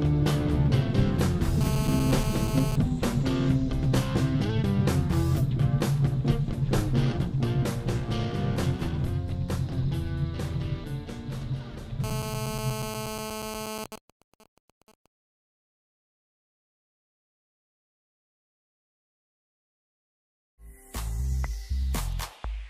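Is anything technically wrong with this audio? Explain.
Yes. Two kinds of interference from a nearby 2G handset appear.

GSM phone buzz occurs from 1.61 to 2.76 s and again from 12.04 to 13.84 s. A phone in a call transmits radio bursts about 217 times a second. The audio circuit rectifies those pulses into the signal path. The result is a harsh, raspy 217 Hz buzz, rich in harmonics. It sits about 8 dB below the sound and bears no relation to it.

GSM signalling bursts follow directly, from 13.86 to 15.06 s. Here the call continues but the talker has gone silent, so the phone sends only sparse groups of bursts. Rectified, these become even ticks with a longer 217 Hz buzz twice a second. They are quieter than the steady buzz, roughly 15 dB down.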